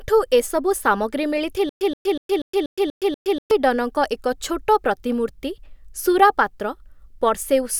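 Speech clip with stutter with silent gaps from 1.69 to 3.51 s, right after "ଏସବୁ ସାମଗ୍ରୀ": a 125 ms fragment repeats seven times, each followed by 116 ms of digital silence, likely a stalled stream replaying its last buffer.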